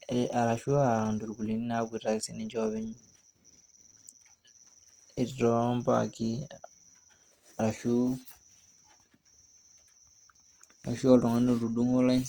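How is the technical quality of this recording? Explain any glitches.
The recording has plainly audible compression damage across the whole clip. Throughout, Opus compression at a low rate (around 24 kbps by the sound) likely refills starved bands with noise, leaving the speech rough and grainy.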